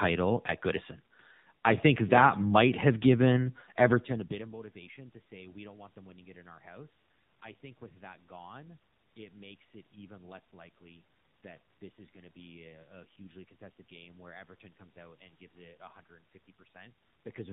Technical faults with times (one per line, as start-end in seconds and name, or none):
0.00-17.53 AMR narrowband mobile codec